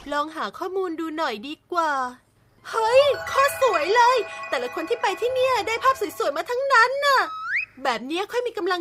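Nothing stood out as a technical problem on listening to the audio.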